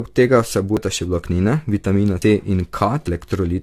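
A speech clip that sounds swirly, smeared and hollow from start to finish, with consonant attacks blurred and a watery, gappy texture in the upper spectrum, more degraded than a single lossy encode would leave it. This is likely generation loss: the audio seems to have been decoded and re-encoded with a lossy codec several times, and the character points to AAC-LC at around 64 kbit/s passed through roughly four times. Each pass re-quantises on a shifted frame grid, so the noise and spectral holes stack up. At 0.77 s and again at 2.22 s there is an abrupt jump in the sound, as though about a tenth of a second has vanished with no silence left behind. At 3.07 s the same happens with a larger skip, roughly a third of a second missing. These are likely dropped buffers from an overrun: the recording program failed to collect its samples before the hardware overwrote them, so each lost stretch disappears and the audio on either side is butted directly together.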